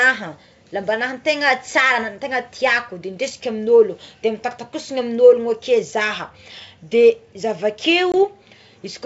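At 8.12 s the speech drops out for about 20 ms, roughly one packet's worth. This is packet loss on an ADPCM call. The gap is filled with silence and has hard edges. The decoder's predictor and step size lose track of the sender's. When the speech comes back, it is slightly distorted. Decoder and sender fall back into step by 8.23 s. The wideband G.722 sound, consistent with 64 kbit/s, stays clear up to that point.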